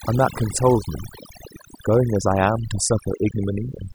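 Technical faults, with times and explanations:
Throughout: overdone noise removal. The noise reduction was set so aggressively that narrow frequency bands sitting near its noise estimate are pulled down or switched off, taking the quieter parts of the speech with them. The background drops and breaks up into twinkling specks.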